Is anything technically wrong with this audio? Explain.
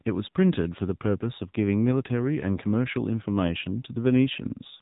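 Yes. The speech carries AMR narrowband mobile codec damage from start to finish, and it is plainly audible. Nothing reaches above about 3.8 kHz. The codec rebuilds the speech from a vocal-tract model fed by sparse pulses in short frames, and the low bit budget, which fits an AMR-NB mode near 7.4 kbps, leaves the voice buzzy and synthetic. A plain telephone band limit would sound muffled but natural. Here the thin, buzzy, artificial texture is what points to the mobile codec.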